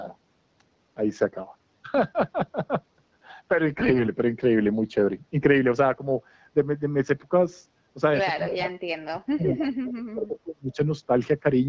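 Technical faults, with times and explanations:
3.72 to 4.08 s, AMR bit errors: unprotected bits in the codec frames arrived flipped, misplacing excitation pulses and skewing gain and spectrum, so the speech turns hoarse and gargly, roughly 4 percent.
8.5 to 10.78 s, speech suppressed in double talk: the echo canceller, likely confused by both sides talking, pulled the speech down in pieces, dropping by up to around 30 dB, for about 1.5 s in total.
9.41 to 9.69 s, echo leak: residual loudspeaker pickup, likely slipping past the echo canceller, returns as a copy delayed by 376 ms, sitting around 15 dB below the speech.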